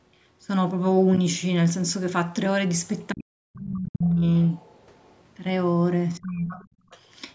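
From 3.11 to 4.27 s the talker's speech sinks in pieces, at its deepest by about 40 dB and for about a second in all. This is speech suppressed in double talk, with the echo canceller likely turning down the talker together with the echo while both sides spoke. Unlike a simple dropout, the voice breaks up instead of stopping cleanly.

From 4.49 to 5.2 s the other side's voice leaks through as a faint second voice, about 35 dB below the talker. The likely cause is loudspeaker echo that the canceller failed to remove. Unlike suppression, this adds an extra voice rather than taking the talker's away.

A shorter double-talk dip follows from 6.18 to 6.57 s. It lasts about 0.4 s and goes about 20 dB deep, again likely from the canceller. It overlaps a louder leak from 6.51 to 6.66 s, only about 20 dB under the speech and likely unremoved echo.

From 6.85 to 6.9 s the background is gated by the echo canceller. 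The room sound drops by about 17 dB for roughly 50 ms and then returns. Here the room sound dips, not the voice. A last scrap of leaked voice, about 30 dB down and likely echo, follows from 6.9 to 6.98 s.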